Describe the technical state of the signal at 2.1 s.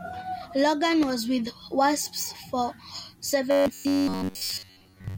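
At 2.1 s the speech signal is intact, with no dropout, clipping, distortion or other technical fault.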